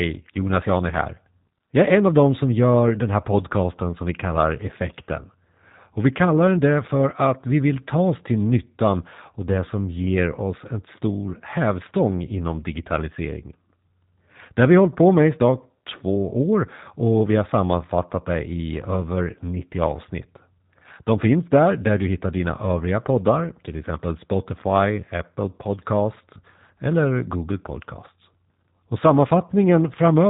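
From start to finish the speech sounds thin, slightly rough and buzzy, with a synthetic, processed edge and no air or sibilant sparkle, because nothing reaches above 3.8 kHz. This is the G.729 codec at work, and the plainly audible damage fits an 8 kbit/s stream. Rather than storing the waveform, it rebuilds each 10 ms frame from a vocal tract filter, a pitch predictor and a handful of pulses, and that coarse reconstruction produces the roughness.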